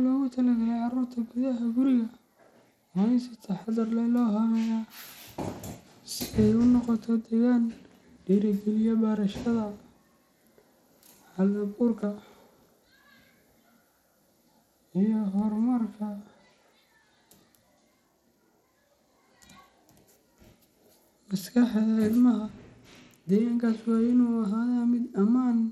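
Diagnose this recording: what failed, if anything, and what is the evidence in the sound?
The codec stage failed. Across the whole speech clip the treble flickers and a gritty grain rides on the sound, likely from Bluetooth SBC compression with a starved bit pool, which fits 96 kbps. The upper sub-bands lose their bits, so a spectrogram shows blocky, blinking top bands.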